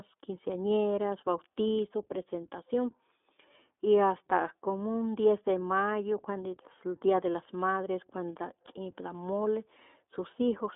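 Throughout the speech, the signal has passed through the iLBC codec, which squeezes the line into a narrow telephone band and codes each 20 ms frame on its own, its rate pointing to the 15.2 kbps mode. Nothing below 250 Hz or above 3.6 kHz survives, so the sound is thin and muffled. Because each frame's excitation is rebuilt independently, the speech has a plainly audible rough, slightly synthetic grain.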